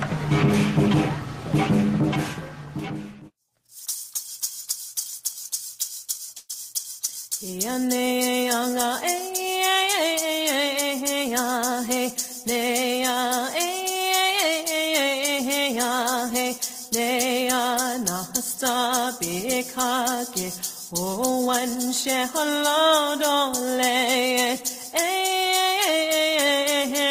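From 6.37 to 6.52 s the sound stalls into a brief fading buzz, a call audio freeze, then resumes where it left off. Delayed packets likely drained the jitter buffer, so the receiver stretched the last sound, inserting about 117 ms and adding that much delay while losing nothing.

From 12.46 to 13.40 s, and again from 13.83 to 14.23 s, the audio runs faster at unchanged pitch, about 4% and then 7% fast, the second stretch sounding hurried. This jitter buffer speed-up trims pitch-period slices, around 40 ms per stretch, to shrink an overfull buffer.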